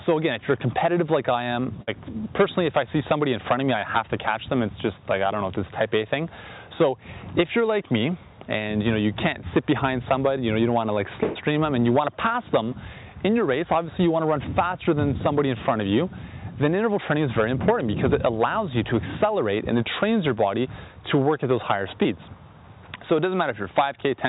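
Bursts of packet loss at 1.82 to 1.89 s and 11.23 to 11.37 s show the receiver extending the last sound and fading it over about 53 ms and 119 ms, then resuming with about 60 ms and 120 ms of audio gone. A short concealed packet loss at 22.03 to 22.07 s fills about 13 ms by continuing the preceding sound, then blends back, with about 20 ms missing. The whole clip passed through a call path whose coding noise fits G.711 mu-law at 64 kbps.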